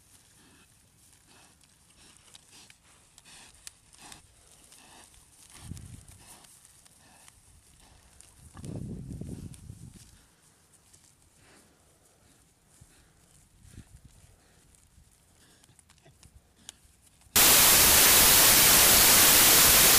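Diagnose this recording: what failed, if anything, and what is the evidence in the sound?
Wrong sample width in sample-format conversion: 32-bit data read as packed 24-bit, so from 17.36 s loud noise buries the sound, slowed to 0.75 speed and lowered in pitch.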